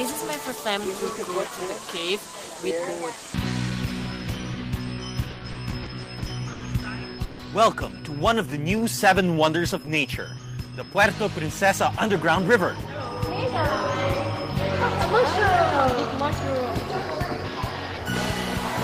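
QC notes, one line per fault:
5.21–6.62 s, repeated stalls (stutter): seven short gaps, longest 80 ms, filled by continuing the last sound; waveform shows repeated smeared holds, audio drags.
7.24–7.41 s, call audio freeze: 150 ms of the last sound held and fading, likely from packets held up; spectrogram shows a frozen, smeared band before resuming.
8.50–9.86 s, jitter buffer slow-down: about 101 ms added by repeating pitch periods, playing at 93% speed; spectrogram shows stretched harmonics at unchanged pitch.
12.37–13.47 s, jitter buffer speed-up: roughly 50 ms of pitch periods cut, playing at 105% speed; waveform drops whole cycles, pitch lines stay level, sound hurried.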